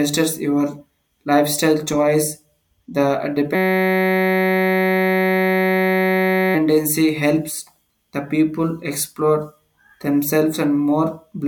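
Speech clip with a system hang loop from 3.55 to 6.55 s: a 5.33 ms fragment repeats hundreds of times, forming a steady 188 Hz buzz that fits a 256-sample buffer, before "helps the people explore".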